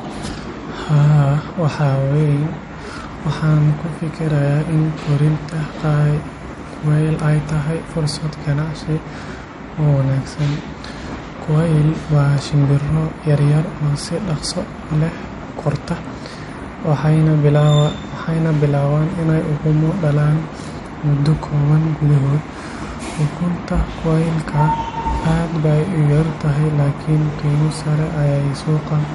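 Throughout this speech recording the sound is watery and swirly, with nothing above 11.1 kHz, which is likely MP3 compression at a low bitrate around 48 kbps: bits ran short, so the treble was cut off and weak frequency lines flicker between frames.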